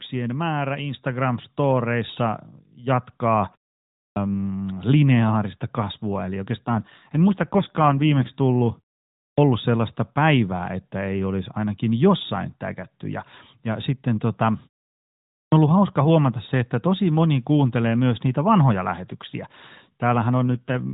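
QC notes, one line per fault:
1.02 s, microphone volume stepped up: the call software judged the input too quiet and raised the microphone's volume in a single step, so the speech and the background together jump up by about 4 dB at once, heard as a sudden level change.
3.99 s, 9.22 s and 15.35 s, clipped start after a pause: after silences of 0.51, 0.49 and 0.75 s, the output device had gone idle and needed time to wake, so the first 169, 156 and 172 ms of sound are swallowed and words begin abruptly.
6.66 to 8.32 s and 20.49 to 20.93 s, AMR rate drop: a weak radio link made the network switch the AMR codec to a lower mode, which fits a fall from 12.2 to 5.9 kbps. The bandwidth holds and there is no gap, but the speech turns rougher and more synthetic.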